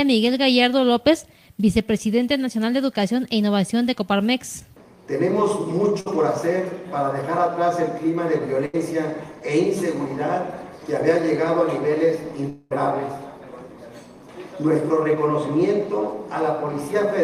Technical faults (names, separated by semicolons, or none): short concealed packet loss; burst of packet loss; long network dropout